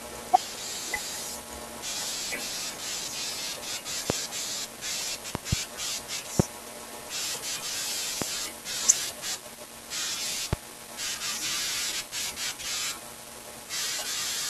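A speech recording marred by loud pops. Sharp bursts land at 4.10–4.13 s, 5.35–5.55 s, 6.40–6.42 s, 8.22–8.24 s and 10.53–10.55 s. The one at 5.35 s is a double pop in quick succession. Each peaks around 25 dB above the speech, the last nearer 20 dB. The speech continues underneath them. The likely cause is a brief voltage spike, from a connector, switch, static or driver glitch, entering the signal chain.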